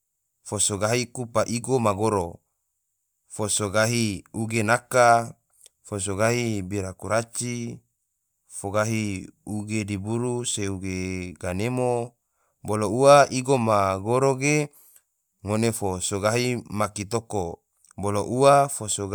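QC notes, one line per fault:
No fault found in this speech clip.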